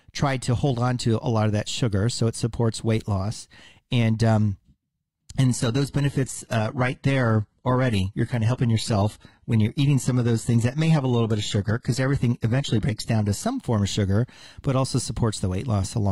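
From 5.44 to 13.44 s the speech drops suddenly to an adaptive stream at a lower bitrate, which fits HE-AAC at 16 kbit/s replacing 96 kbit/s AAC. Treble dulls and codec artefacts rise; a spectrogram shows a hard ceiling at 11.9 kHz, the waveform no gap, before "form of sugar but".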